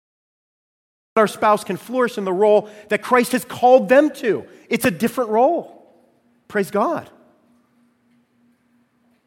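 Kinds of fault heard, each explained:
Cut-off start: The speech clip opens on digital silence until 1.17 s, when the sound begins abruptly in the middle of speech. There is no natural attack or fade-in. The capture or stream started late, so the opening of that utterance was lost.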